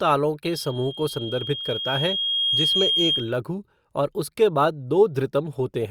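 Speech is overtaken by loudspeaker feedback squeal from 0.43 s to 3.38 s. A single 3.2 kHz tone swells over about two seconds until it sits roughly 5 dB above the speech. The microphone is hearing its own loudspeaker, and loop gain at that frequency exceeds one.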